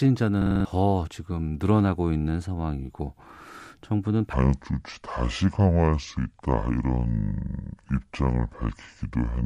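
A system hang loop runs from 0.42 to 0.65 s. For that stretch the playback path stalled while the sound hardware kept re-reading the same block of its ring buffer. A 46 ms fragment of speech repeats five times at 21.5 Hz, giving a rapid, rattling stutter in place of the speech, and about a fifth of a second of the real audio never arrives. A fragment that length fits a 2048-sample buffer.

A section at the wrong speed begins at 4.33 s and lasts to the end of the clip. From that point the speech plays at 0.682 times its recorded speed, so it becomes slower and drops by roughly seven semitones together. The speech turns deep, drawn out and sluggish. The change is abrupt, with no gradual slide. The likely cause is that this portion was fitted to a mismatched clock during editing or playback.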